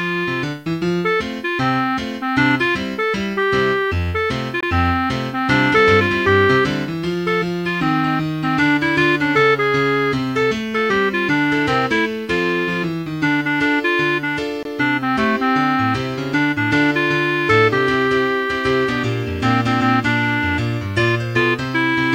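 At 4.61 to 4.63 s and again at 14.63 to 14.65 s there's a gap between chunks: the audio arrived in 10-second pieces and roughly 23 ms of silence got left at each join. It's a brief hole, though no sound is actually missing.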